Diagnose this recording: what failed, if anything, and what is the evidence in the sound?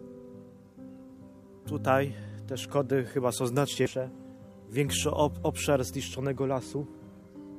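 Codec stage: damaged data in the compressed stream gives a short blip at 3.86 s, where the decoder misread corrupted frames, lost sync and hunted for the next header.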